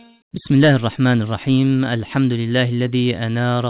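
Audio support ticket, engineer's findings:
Nothing stood out on listening; top end stops at 4 kHz, consistent with a narrowband G.711 mu-law call path.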